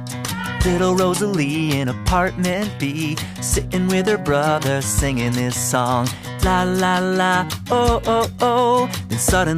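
Nothing here gives a listener any technical fault to flag, from the first moment to the last.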